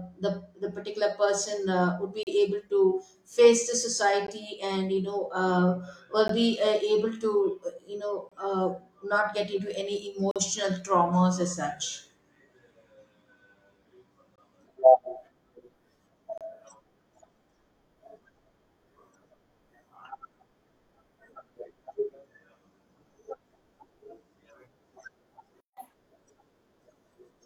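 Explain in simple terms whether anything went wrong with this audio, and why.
Several things went wrong in this speech clip.

First, gaps between stream segments: brief hard-edged silences at 2.23, 4.27, 6.28, 8.29, 10.31, 12.35, 14.36 and 16.38 s, each between about 6 and 45 ms long. They arrive every two seconds, which fits a stream cut into 2-second pieces whose timings don't quite meet. No speech is lost; the player just inserts silence.

Second, a playback stall: from 25.60 to 25.77 s the sound stops for about 165 ms, most likely because the player ran out of data. Unlike the segment gaps, this is a single, longer dropout that doesn't follow the two-second rhythm.

Third, catch-up at higher speed: right after the stall, from 25.77 to 25.93 s, the speech plays at double speed and sounds much higher, about ten semitones up. The player is rushing through the backlog to make up some of the lost time. 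That this chipmunk burst follows directly on the silence is what shows it is recovery from the stall.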